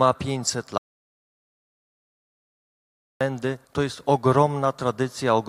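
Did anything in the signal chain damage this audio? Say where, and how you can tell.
Yes. An audio dropout to silence runs from 0.78 s to 3.21 s, about 2.4 s of silence with no room tone. That points to the input side, likely a lost device link or mute.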